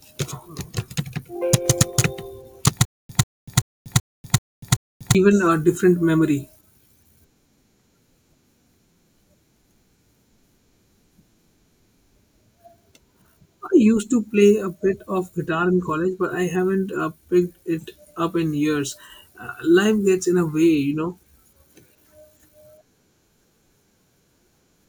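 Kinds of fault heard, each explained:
Stutter with silent gaps: from about 2.85 to 5.15 s the speech locks onto a 141 ms burst that repeats six times, each followed by about 242 ms of dead silence, so roughly every 383 ms. It's likely a stalled stream replaying its last fragment, and the audio meant for that stretch is gone.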